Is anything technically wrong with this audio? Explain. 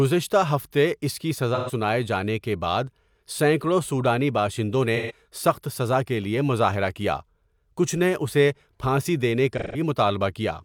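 Yes. AAC frame loss with concealment occurs at 1.55–1.71 s, 4.96–5.12 s and 9.53–9.80 s. Gaps of about 128 ms and 171 ms, which fit three and four lost frames, are patched from the previous spectrum, so the speech turns briefly smeared and phasey. A spectrogram shows blurred, detail-less bands; the waveform shows noisy filler.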